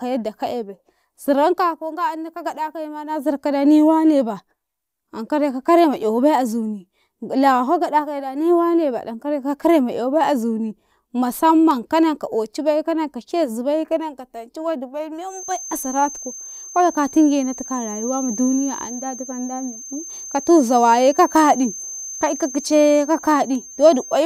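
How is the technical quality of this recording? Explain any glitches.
The recording has one clear flaw. From 15.24 s, just after "wadi bai", to the end, a feedback whistle at 6.3 kHz sits about 15 dB under the speech, likely from a speaker-to-microphone loop hovering at feedback. On a spectrogram it appears as a thin horizontal line.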